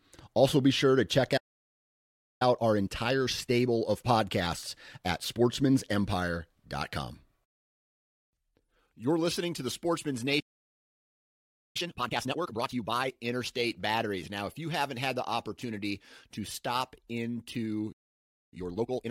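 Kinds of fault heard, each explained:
Playback stall: the speech cuts out mid-flow and the output goes silent, most likely because the player ran dry of buffered data or its audio thread was held up. It happens three times: after "be sure to check" for about 1.03 s, around 10.4 s for about 1.35 s, and after "opportunity to stop into" for about 0.6 s.
Time-compressed catch-up: once each stall clears, the player works off the backlog by trimming small slices of audio and cross-fading across the joins, so the speech runs fast while keeping its normal pitch. After the first gap it plays at 1.15 times speed for 3 s. After the second and third gaps it runs at double speed.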